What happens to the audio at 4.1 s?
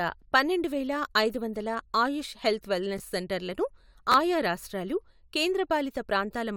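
At 4.12 to 4.14 s the audio has chunks out of order. One chunk of about 10.7 ms plays one chunk late, after the chunk that should follow it. Nothing is missing. The three hard joins give a brief jumbled moment just before "ఆయా రాష్ట్రాలు".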